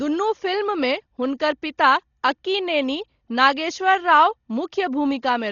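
From start to finish the speech carries heavy damage that likely comes from Dolby Digital compression at a very low bitrate, with the sound pointing to roughly 32 kbps. The encoder has cut the band so that nothing remains above 6.9 kHz, leaving the speech dull. Bins starved of bits are refilled with dither noise, heard as a rough, fluttering grain around tonal parts. A spectrogram shows a hard ceiling at 6.9 kHz and speckled, noisy patches between harmonics.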